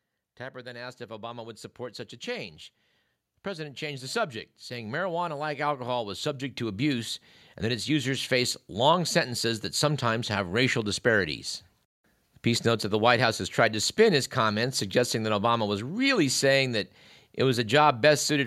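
Automatic gain rising affects this speech clip: the gain control judged the input too quiet and kept lifting it from 0.38 s to 10.38 s, by about 16 dB overall, so voice and background swell together slowly until just before "racial disparities".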